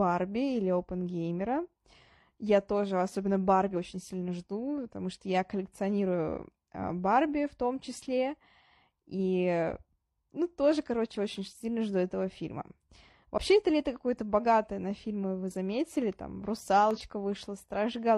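A brief chirp, squawk, click or short hole cuts through the speech at 13.33 to 13.39 s, just before "это лето", and another at 16.91 to 16.99 s. Both come from damaged data in a compressed stream: corrupted bytes make the decoder misread frames and lose sync until it finds the next valid header.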